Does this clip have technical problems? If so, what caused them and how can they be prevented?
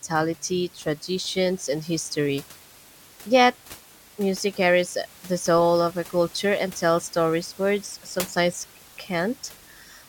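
No, nothing in this speech points to a system fault, and the room noise sitting about 22 dB below the speech belongs to the recording space, so there is nothing to prevent.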